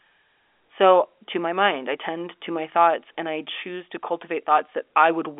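No technical faults can be heard anywhere in this speech recording. It comes over the G.711 telephone coding path, which is working as intended, so the sound is limited to the narrow phone band with nothing above about 3.7 kHz.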